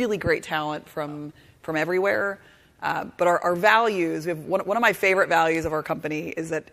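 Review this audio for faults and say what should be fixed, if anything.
No faults turn up in this audio, so nothing needs to be fixed.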